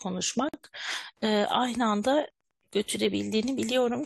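At 0.49 s the speech drops out for about 49 ms, ending at 0.54 s: a gap at a join of encoded pieces. Two separately encoded segments were butted together untrimmed, leaving encoder delay and end padding. On a spectrogram, a blank vertical band with slightly smeared edges; the waveform flatlines, then resumes mid-flow.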